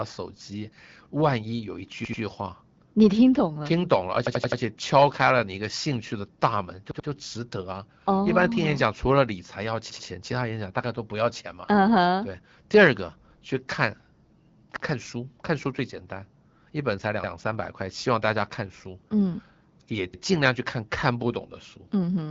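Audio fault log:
4.27–4.61 s, 6.91–7.08 s, 14.76–14.85 s: repeated buffer. The same 85 ms piece replays (four, two, then one extra times), which fits a 4096-sample buffer, with hard joins. No sound goes missing, unlike a dropout.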